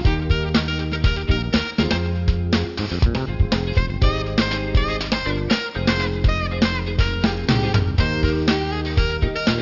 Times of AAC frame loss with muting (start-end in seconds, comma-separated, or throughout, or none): none